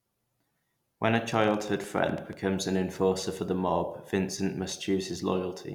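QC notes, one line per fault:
1.16–2.34 s, train of clicks: about fifteen unevenly spaced pulses, near 12 per second, peaking roughly 5 dB over the speech before "an enforcer for the", likely interference.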